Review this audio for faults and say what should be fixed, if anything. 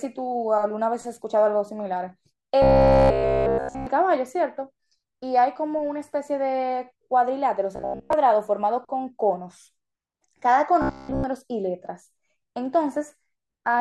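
Robotic sound from repeated short buffers at 2.62–3.87 s, 7.76–8.13 s (mostly repeated) and 10.82–11.24 s: a rigid 66.8 Hz buzz, likely from roughly 15 ms buffers looping. Unlike dropouts, the speech never goes silent. Prevent it by enlarging the receive buffer or jitter buffer so audio arrives in time.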